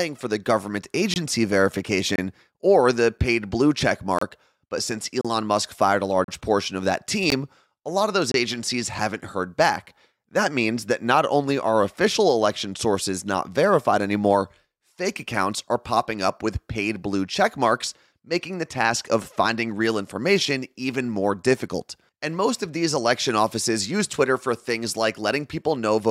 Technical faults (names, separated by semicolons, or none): gap between stream segments